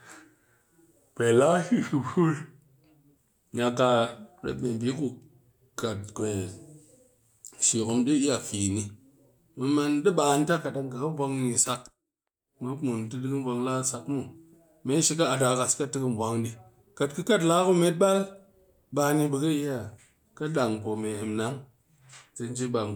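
Nothing here calls for comment, since the speech runs its course without any technical fault turning up along the way.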